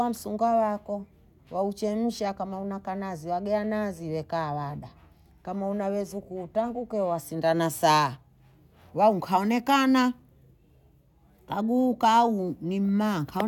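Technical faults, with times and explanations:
No technical faults heard.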